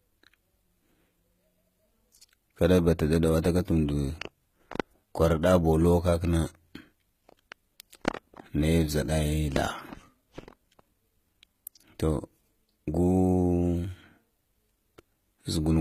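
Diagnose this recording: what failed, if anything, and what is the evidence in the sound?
At the codec stage, the speech shows stacked compression damage throughout: nothing sounds above 14.9 kHz, and two kinds of artefact overlap. This is likely transcoding between lossy codecs, fitting AAC-LC at 48 kbit/s re-encoded as HE-AAC at 20 kbit/s, which spent bits re-coding the earlier damage.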